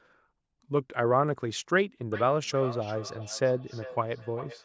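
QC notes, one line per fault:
2.12 to 4.64 s, feedback echo between two devices: the speech starts returning at a fixed interval of roughly 0.4 s and continues to the end of the clip. The repeats are thinner and more ringing than the direct sound, peaking about 14 dB below it. A second device on the same call is playing this microphone's signal aloud, and the microphone picks it up again. The local echo canceller cannot remove sound from another device's speaker. The call processing's band limit leaves nothing above 8 kHz.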